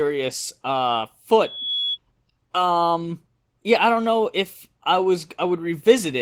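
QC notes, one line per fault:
throughout, Opus voice compression: The speech carries plainly audible low-rate codec damage. It sounds muffled, hoarse and faintly robotic, because the excitation is coded coarsely. The band isn't cut to 8 kHz. Some top end survives, which points to hybrid operation, where linear-prediction coding handles the lower band and a transform layer thinly covers the rest. That fits a rate around 16 kbps. Unlike a plain low-pass or a lost-packet dropout, the grain is steady and present everywhere.
1.44–1.98 s, loudspeaker feedback squeal: A single tone at 3.4 kHz swells out of the speech. It rises over roughly a third of a second to sit only a little below the speech level, then stops. It comes from the loudspeaker's output re-entering the microphone, where loop gain above one at that frequency makes it feed on itself. Its steady pitch and self-building swell set it apart from a test tone or ringing, which start at full level.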